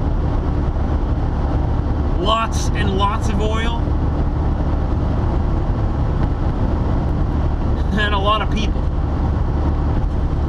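From 5.11 to 7.09 s a doubled audio track appears: a second full-band copy trails around 300 ms behind, roughly 5 dB quieter, likely from a slower capture path mixing in. Unlike an echo, it carries no decay or room colour, and switches on and off abruptly.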